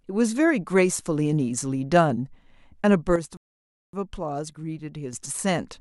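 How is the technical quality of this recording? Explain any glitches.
The recording has two glitches, both in the second half.

From 3.16 s to 5.13 s there is a sudden gain jump: speech and background noise drop together by about 7 dB, likely from a gain setting applied without a ramp. The waveform envelope steps down abruptly.

From 3.37 s to 3.93 s a rebuffering stall cuts the speech to silence for about 0.56 s, then resumes exactly where it stopped. This appears as a flat waveform gap and a blank vertical band on a spectrogram.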